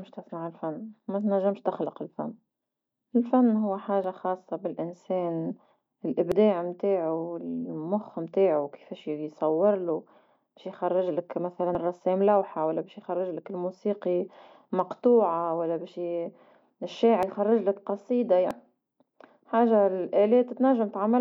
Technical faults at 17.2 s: dropped buffer (overrun)

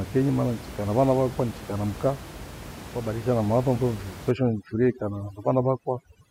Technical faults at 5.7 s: overdone noise removal

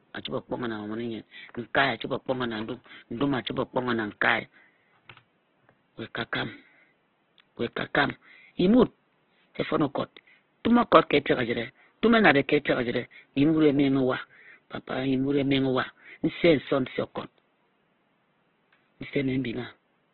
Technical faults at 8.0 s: Opus compression; loud pop

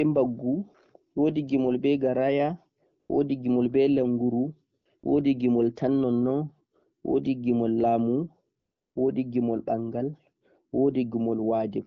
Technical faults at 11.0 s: none

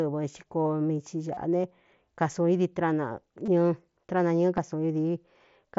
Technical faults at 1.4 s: concealed Bluetooth headset packet loss

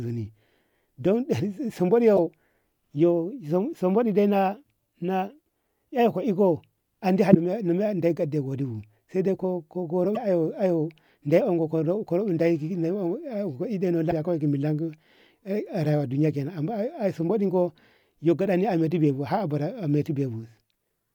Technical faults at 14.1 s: damaged data in a compressed stream

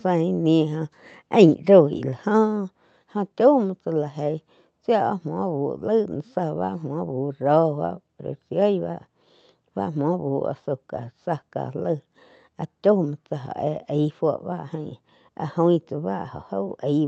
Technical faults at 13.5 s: none

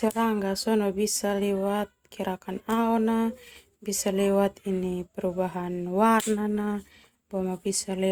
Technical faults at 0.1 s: none

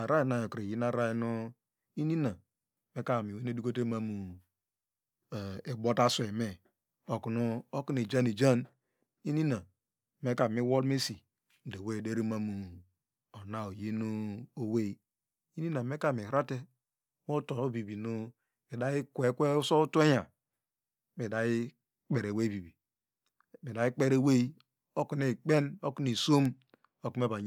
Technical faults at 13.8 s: none

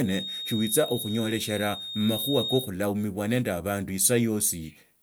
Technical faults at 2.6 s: feedback whistle

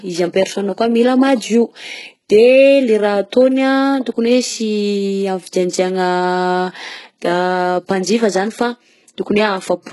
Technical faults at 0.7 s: HE-AAC compression

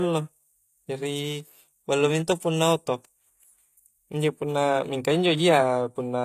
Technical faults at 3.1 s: HE-AAC compression

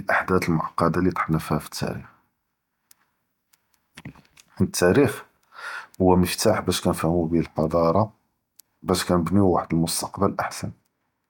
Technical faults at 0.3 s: none

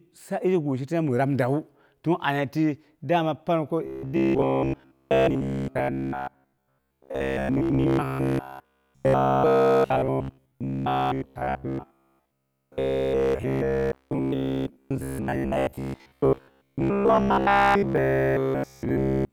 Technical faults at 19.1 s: robotic sound from repeated short buffers

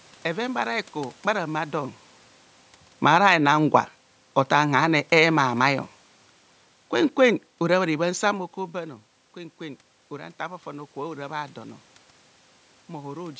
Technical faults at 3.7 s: automatic gain rising

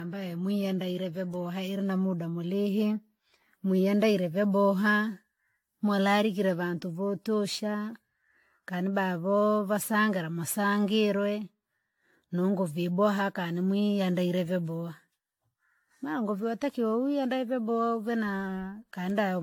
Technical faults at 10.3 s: generation loss

